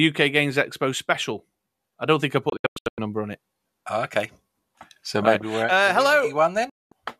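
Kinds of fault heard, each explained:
digital broadcast dropout: the receiver hit bad frames and muted, so the speech snaps out in short scattered holes after "I don't think I" near 2.5 s, and again at 6.7 s.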